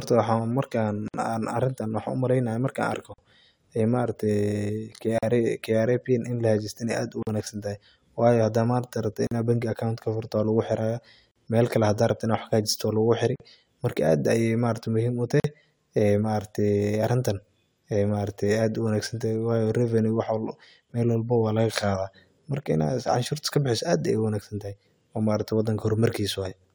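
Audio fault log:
1.08, 3.14, 5.18, 7.23, 9.27, 11.31, 13.36, 15.40 s: gap at a join of encoded pieces. The speech drops into silence every 2.0 s, 59 ms the first time and 43 ms after, because each separately encoded piece kept its untrimmed start delay and end padding, leaving holes with smeared edges.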